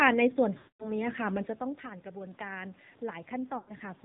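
Throughout, the speech carries the AMR narrowband mobile codec's buzzy, synthetic colouring, which fits a low rate around 7.4 kbps. A spectrogram shows nothing above 4 kHz. From 0.58 to 0.98 s, and again from 3.58 to 3.73 s, lost AMR speech frames let the decoder repeat stale settings with falling gain. The sound drags, then fades, and the waveform tapers to near silence within 0.1 to 0.2 s, across losses of roughly 220 ms and 100 ms. Between 1.23 and 3.89 s, after the talker drops back around 1.5 s, automatic gain rises about 4 dB. Voice and room noise swell together as a gradual envelope climb.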